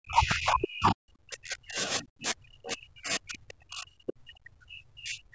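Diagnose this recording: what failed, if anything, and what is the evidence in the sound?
The failure sits in the call processing stage. There is speech suppressed in double talk from 0.0 to 1.81 s and again from 1.98 s to the end at 5.3 s. The talker's level dips and breaks up, at worst by about 40 dB. The likely cause is the echo canceller. It heard both sides at once and could not tell the near talker from the loudspeaker echo. So it pulled everything down. This happens under the usual call band limit, with nothing above 8 kHz.

The same stage shows the other side's voice leaking through. A brief scrap of a second voice appears at 4.07 to 4.13 s. It lasts about 60 ms. It sits roughly 20 dB below the talker. The likely mechanism is residual echo. The far side was playing from the loudspeaker, and the microphone picked it up. The canceller failed to subtract that short piece, so it passed into the outgoing audio.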